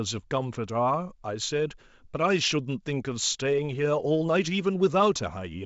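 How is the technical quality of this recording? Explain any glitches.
No glitches can be heard in this recording, which carries G.722 wideband telephone coding at 64 kbit/s, so the sound reaches up to 7.7 kHz with nothing above that.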